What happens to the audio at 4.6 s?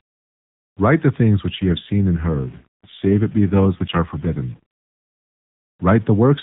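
Around 4.6 s the rough, synthetic voice clears as an AMR rate drop ends. From 1.5 s, just after "the things", the codec fell from 12.2 to 5.9 kbps, then returned to 12.2. Distortion with noise filling the pauses continues through this moment and the whole clip, likely from a stuck bit.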